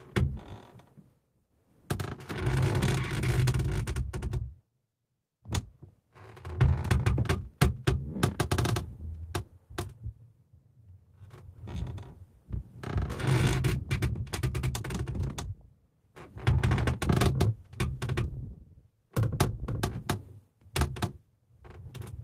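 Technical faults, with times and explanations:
No technical faults can be heard anywhere in this audio.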